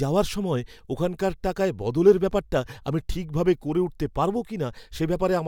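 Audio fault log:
Nothing to log here: the speech comes through without a single glitch or problem anywhere along the way.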